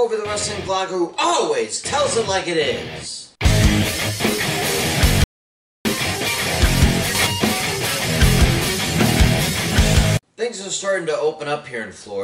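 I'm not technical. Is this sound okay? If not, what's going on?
No. The input was likely lost briefly, causing an audio dropout to silence: from 5.24 to 5.85 s the sound cuts to complete silence, and that moment is gone.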